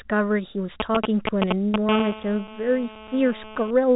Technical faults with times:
0.80-1.90 GSM signalling bursts
1.90-3.71 GSM phone buzz

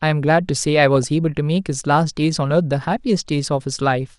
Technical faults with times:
0.00-4.19 MP2 compression
0.96-1.08 DAB burbling

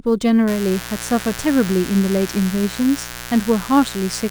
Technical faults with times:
0.00-4.30 sample clock jitter
0.47-4.30 mains buzz

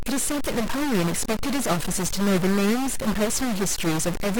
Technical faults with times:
0.00-4.39 stuck bit

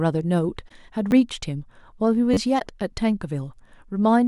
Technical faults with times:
0.68-0.72 corrupt frame concealed
1.11 repeated buffer
2.34-2.37 repeated buffer
2.59-2.62 corrupt frame concealed

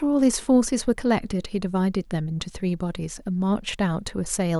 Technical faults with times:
none

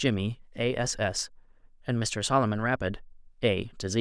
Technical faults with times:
none

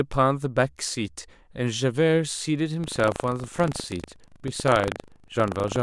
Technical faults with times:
2.80-5.83 buffer tearing

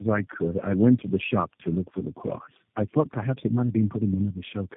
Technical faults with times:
0.00-4.76 tandem speech coding

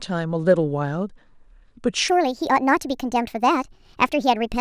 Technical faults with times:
2.08-4.61 wrong sample rate

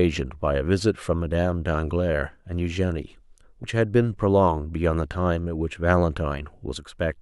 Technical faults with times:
3.62 damaged data in a compressed stream

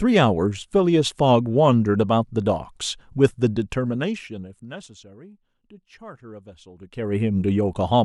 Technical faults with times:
none

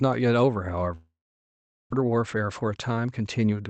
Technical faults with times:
0.95-1.94 long network dropout
2.02-3.69 jitter buffer speed-up

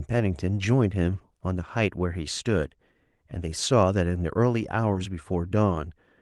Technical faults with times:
4.93-4.97 short concealed packet loss

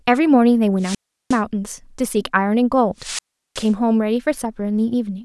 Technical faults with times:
0.79-1.41 wireless microphone squelch dropout
2.98-3.72 wireless microphone squelch dropout

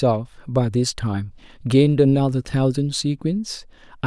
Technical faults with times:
none

